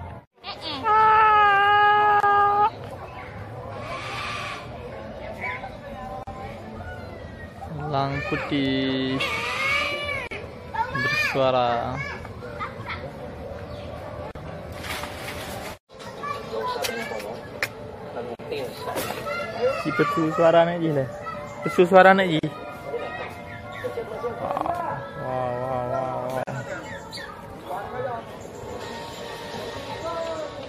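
Brief dropouts of silence cut into the sound at 2.20, 6.23, 10.27, 14.31, 18.35, 22.39 and 26.43 s, about 40 ms each (the first 29 ms), every 4 s: gaps at joins of encoded pieces, where separately encoded pieces were joined without trimming their encoder delay and padding.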